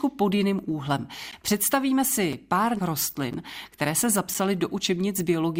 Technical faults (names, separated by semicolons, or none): gap between stream segments